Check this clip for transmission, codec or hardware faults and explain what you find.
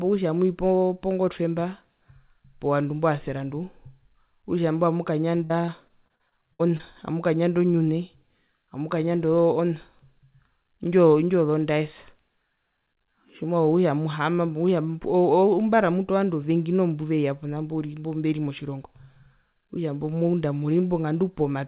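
One transmission fault stands out. The call path itself passes nothing above 4 kHz, as expected for G.711 A-law.

From 5.44 to 6.81 s, between "okutja imbo" and "amukanyanda onyune", there is repeated packet loss (robotic sound). Eight gaps, the longest 60 ms, are each filled by extending the preceding sound, so the speech turns choppy with pieces missing. A spectrogram shows smeared, repeated frames interrupting the formant tracks, and the waveform shows short stuttering repeats.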